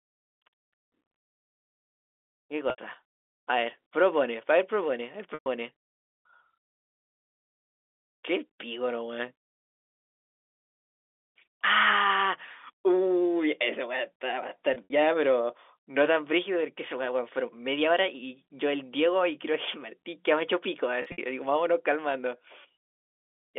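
Packet loss with pitch repetition occurs at 2.70 to 2.78 s, 5.34 to 5.46 s, 14.74 to 14.90 s and 21.02 to 21.18 s. At each point roughly 80 to 120 ms of speech dropped out of the stream. The receiver covered the gap by looping the last pitch cycle it had, which gives a brief held, buzzy tone. In the last two events, the loss is split into runs of up to 60 ms spread across 160 ms, so the stutter sounds broken up. All of this passes through narrowband G.711 telephone coding, which limits the band to about 300 Hz to 3.6 kHz.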